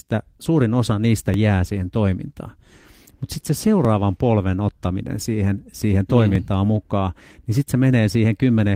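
This speech clip has overlapping chunks. A click or stutter lands at 1.34 s, after "suurin osa niistä"; at 3.85 s, after "sitten se"; and at 6.35 s, before "mm mukaan niin sitten". The joins fall every 2.5 s. Each chunk starts early, so about 6.5 ms replays.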